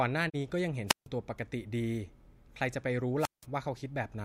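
At 0.28 s the speech fades out over about 20 ms and drops into a short gap of silence before resuming at 0.36 s. Roughly 32 ms of audio is simply missing, which fits a single lost frame. This is a digital broadcast dropout: the receiver lost the signal or rejected a corrupted frame, so it muted until valid frames arrived. Whatever was transmitted during that gap is gone for good.

Between 0.87 and 1.07 s, hiss rises briefly, then the sound falls into a near-silent hole of about 150 ms before the voice comes back. The same pattern returns from 3.19 to 3.46 s, where the hole lasts about 175 ms. These are wireless microphone squelch dropouts. The analogue FM radio link faded, the background noise climbed as the signal weakened, and the receiver's squelch cut the output until the signal recovered.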